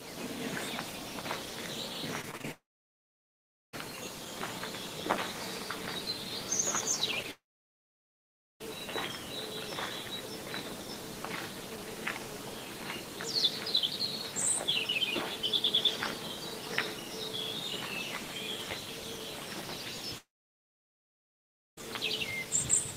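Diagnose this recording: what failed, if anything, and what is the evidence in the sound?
Repeated packet loss (robotic sound) at the network stage: between 2.21 and 2.46 s there are four short holes, the longest 25 ms. Each is patched by repeating the previous sound, so about a third of that stretch is synthetic and sounds choppy. A spectrogram shows smeared, repeated slices.

A long network dropout is the likely cause of three gaps, at 2.52–3.75 s, 7.31–8.62 s and 20.18–21.83 s. In each, the sound briefly continues as a fading buzz or hiss and then falls silent for about 1.1, 1.2 and 1.5 s, and the lost audio never returns. The waveform goes flat, and the spectrogram shows blank columns.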